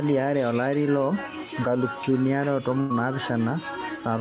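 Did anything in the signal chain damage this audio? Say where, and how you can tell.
Yes. At 2.80 to 2.92 s the network stage shows a burst of packet loss: about 100 ms of speech never arrived, so the receiver's concealment stretched the last good sound into a held, fading tone before the audio picks up further along with that span gone. A buffer underrun would instead leave a hard silence or a click. The concealment here masks the gap while still skipping ahead. Throughout, the audio stops at 4 kHz, which fits a G.711-style telephone codec.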